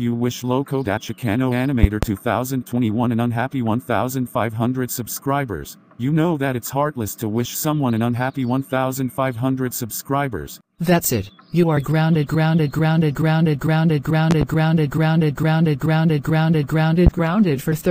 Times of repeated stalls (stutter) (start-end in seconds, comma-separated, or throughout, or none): none